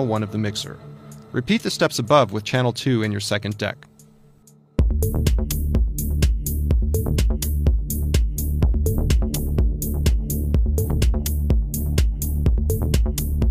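No technical faults can be heard anywhere in the recording; the signal holds steady throughout with nothing that points to a problem in how it was captured or carried.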